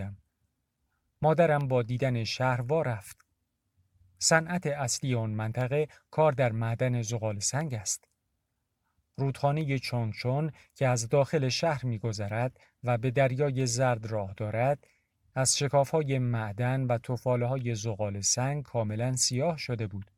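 From 1.61 s to 19.58 s, periodic USB or driver dropouts recur every 2.0 s. Each blanks a tiny sliver of signal to silence, heard as a regular tick.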